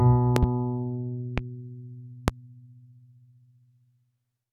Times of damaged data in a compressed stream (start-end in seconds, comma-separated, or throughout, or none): none